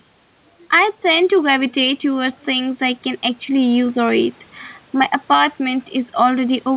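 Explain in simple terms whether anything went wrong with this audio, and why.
The level of the speech keeps breathing in and out for the whole clip. Loud and quiet moments end up closer in loudness, so the sound is squashed. This is gain pumping. The likely cause is a microphone set far too sensitive, so an automatic level control keeps pulling the volume down hard on every loud sound and letting it back up in the gaps.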